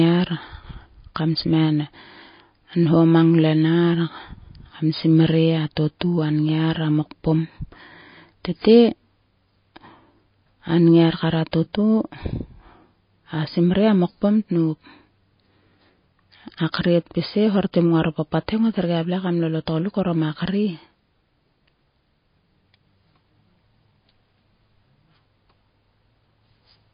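From start to finish the speech carries plainly audible damage consistent with MP3 compression, likely from a low-bitrate encode. Nothing is heard above about 5 kHz, so sibilants sound dull and clipped. The encoder seems to have been short of bits, which fits a rate near 24 kbps. Quiet frequency detail flickers in and out between frames. The result sounds watery and swirly, with metallic chirps on s sounds and blurred consonant onsets.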